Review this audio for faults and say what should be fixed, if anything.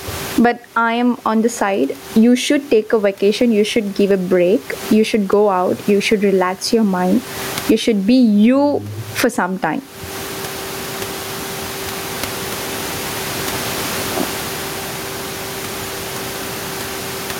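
Gain pumping runs through the whole clip. The room noise sits about 35 dB below the speech, and the gain swings by around 25 dB, squashing loud and soft parts together. The likely cause is input gain set far too high, with a fast limiter or compressor clamping each peak. Lower the microphone gain at the source and slow or bypass the limiter so the level holds steady between phrases.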